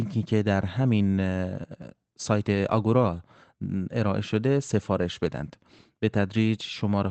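No technical faults audible.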